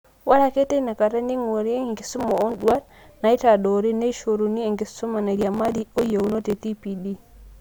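Gritty crackle tears through the speech from 2.07 to 2.89 s, just before "naitadoori neishoruni enkisuma", and again from 5.37 to 6.68 s: processor overload crackle, where dozens of sub-millisecond buffers missed their deadlines and were skipped.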